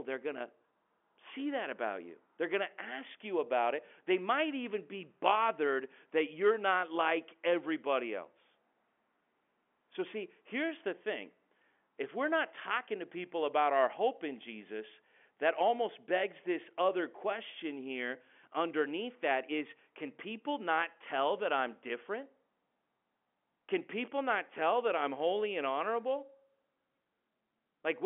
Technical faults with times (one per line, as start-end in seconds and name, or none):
none